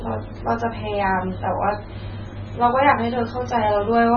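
From start to end, the speech carries heavy MP3 compression damage, likely from MP3 encoding at a very low bitrate. The damage suggests something near 16 kbps. Nothing is heard above 6.7 kHz, so the treble stops at a hard ceiling and the sound is dull. With so few bits, weak frequency lines are dropped and flicker between frames. That gives a watery, swirling texture. S sounds turn metallic, and sharp onsets smear.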